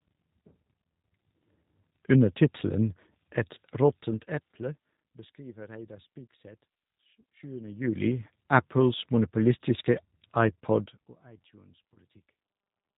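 The whole clip runs through the G.729 codec at 8 kbit/s, and its damage is plainly audible. The speech is rebuilt from a vocal tract filter and a sparse pulse excitation, so it sounds rough and slightly synthetic, with nothing above 4 kHz.

At 3.55 s there is VoIP packet loss concealed by the speech codec. About 20 ms of audio, which fits a single lost packet, is replaced by the decoder's extrapolation from its last pitch and filter. This gives a brief smear of buzzy tone or coloured noise that fades, and the output stays weakened for a short time afterwards while the frame-to-frame state recovers.

From 10.76 to 11.2 s, zipper noise rides on the sound as the level drops by roughly 25 dB. The gain moves in unsmoothed steps of about 2 dB, around 30 per second, and each step leaves a small click, so the fade has a ticking, zipping texture.

At 11.94 s the packet loss concealment happens again for about 20 ms. 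The same fading extrapolation fills the gap, followed by a short stretch of weakened, distorted output before the decoder settles.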